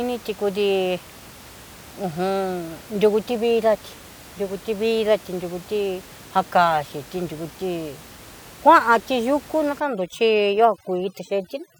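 From 9.8 s to the end, overdone noise removal sets in: a noise reducer pushed far too hard shuts off frequency bands near its noise estimate, quiet voice detail included. Room noise, about 22 dB below the speech, collapses into twinkling near-silence.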